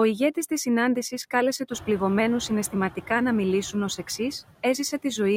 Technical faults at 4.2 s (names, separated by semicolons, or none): noise suppressor artifacts; word clock ticks